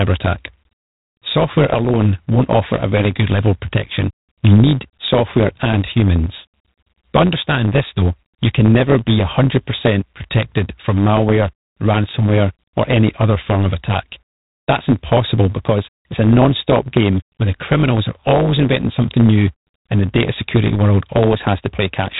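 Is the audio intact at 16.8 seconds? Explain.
No. At 16.8 seconds the speech carries two faults, and both run through the whole clip.

The first is a block size mismatch with truncation. One stage writes longer blocks than the next stage reads, so the tail of every block is lost. The cuts repeat at 100 Hz and produce a steady buzz at that rate. The lost material also makes the speech run about 1.07 times fast. The block length fits 512-sample blocks.

The second is G.726 ADPCM coding. Each sample is sent as a small coded difference from a running prediction, and the coarse steps add plainly audible damage. This is a harsh, rasping hiss that rises and falls with the speech level. That roughness points to a rate of about 24 kbit/s. Nothing passes above 3.8 kHz, so the sound is narrow and telephone-like.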